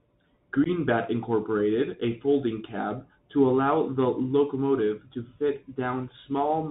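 From the start the speech sounds narrow and muffled, with scratchy s sounds, harsh distortion on loud bright moments, and a grainy hiss underneath. This is the Bluetooth CVSD headset codec, which fits a 64 kbps one-bit link that passes nothing above 4 kHz and whose adaptive step cannot keep up with fast, loud changes.

At 0.64 to 0.67 s, and again at 2.01 s, the speech drops out in short, hard-edged holes and returns briefly quieter. This is unconcealed Bluetooth headset packet loss. About 15 ms of audio, roughly two packets, is missing in the first gap, and about 7.5 ms, one packet, in the second. Each gap is filled with silence or an idle pattern rather than patched over.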